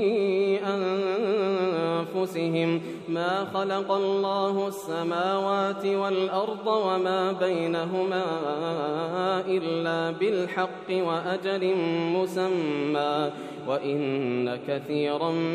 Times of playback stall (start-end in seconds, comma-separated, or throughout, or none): none